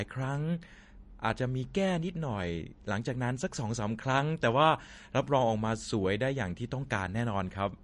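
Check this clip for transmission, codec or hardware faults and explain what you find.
One fault runs through the whole clip. The speech sounds watery and swirly, s sounds turn metallic and smeared, and nothing reaches above 10.6 kHz. This is likely MP3 compression: short of bits, the encoder cut the treble and let weak frequency lines flicker between frames, which fits a bitrate around 40 kbps.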